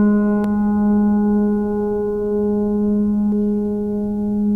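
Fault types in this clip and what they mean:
Damaged data in a compressed stream: a couple of spots in this music where the encoded data itself has gone bad, with bytes lost, zeroed or overwritten, so the decoder can't make sense of those frames, loses its place and has to hunt for the next valid frame header to resync. You hear it as a quick chirp or blip breaking into the music, once at about 0.44 s and again at about 3.32 s.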